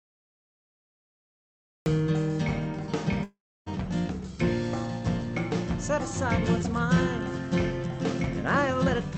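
The clip opens with a cut-off start: digital silence until 1.86 s, then the sound begins abruptly mid-event, with no attack or fade-in. On a waveform this is a flat line that jumps straight to full amplitude. A spectrogram shows a hard vertical edge, with content above 8 kHz absent throughout from the call codec's band limit.

From 3.23 to 3.68 s the sound freezes into a fading, buzzy smear, then drops to silence for about 0.29 s. It resumes with roughly 0.4 s missing and a slight timing shift. This is likely a long network dropout. A spectrogram shows blurred horizontal streaks, then a blank gap.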